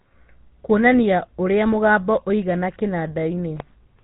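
From start to finish, the speech carries the signature of the GSM full-rate codec. Nothing reaches past about 3.8 kHz, so sibilants and breath lose their edge. The codec models the vocal tract and excites it with a sparse, regular pulse train. Much fine detail is thrown away. That produces the plainly audible buzzy, gravelly roughness heard here. The narrow band and grain together point to a 13 kbps mobile-phone link.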